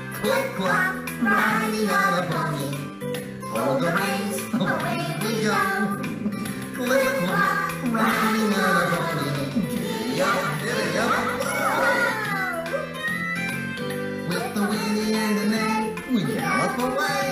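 From about 6.40 s to 12.12 s there's a doubled audio track: a second full-band copy of the sound trails the original by roughly 150 ms, sitting around 5 dB lower. It has no decay and no room colour, so it reads as a flat slapback rather than reverb, and it cuts in and drops out abruptly at those edges. Likely cause is the same signal reaching the mix twice, once via a slower path.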